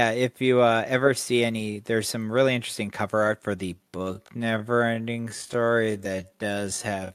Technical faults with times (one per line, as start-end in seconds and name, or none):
3.72-7.14 time-stretched section